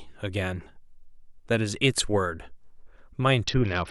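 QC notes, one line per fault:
3.44–3.90 s, Bluetooth SBC bit pool drop: over the last half-second the speech loses its top end and takes on a grainy, gritty texture that lasts to the end of the clip. The encoder has cut its per-frame bit allowance steeply, which fits a fall from a bit pool near 31 to about 7, roughly 61 kbps. The upper sub-bands get few or no bits, dulling the treble, while the remaining bands are coarsely quantised, raising audible noise.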